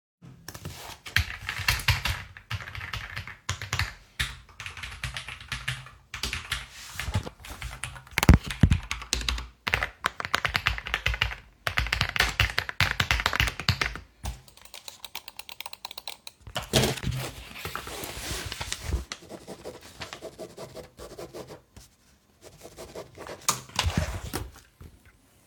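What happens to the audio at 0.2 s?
Nothing goes wrong at 0.2 s: the sound there plays through intact, with no dropout, click, distortion or other fault at that moment.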